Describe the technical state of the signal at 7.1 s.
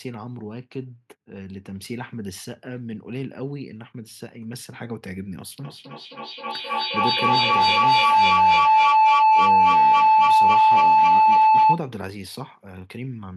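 At 7.1 s the signal is inside a feedback howl that runs from 5.62 s to 11.86 s. Two devices in the same room are joined in one call. Sound leaves a loudspeaker, enters a microphone, and returns louder on each pass. The loop narrows to a tone near 1 kHz. It pulses about every third of a second and peaks about 16 dB above the speech.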